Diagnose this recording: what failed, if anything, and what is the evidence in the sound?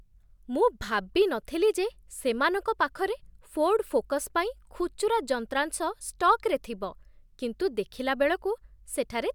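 Nothing failed: listening through the speech, none of the stages from the analogue wiring to playback leaves an audible mark.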